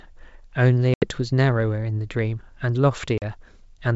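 Speech over a wideband G.722 link with packet loss on an ADPCM call: silent holes of 80 ms at 0.94–1.08 s and 40 ms at 3.18–3.31 s, each a few packets, after which the decoder's predictor and step size lag the sender's until they resynchronise.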